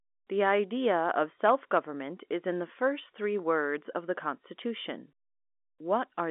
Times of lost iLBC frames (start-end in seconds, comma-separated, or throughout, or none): none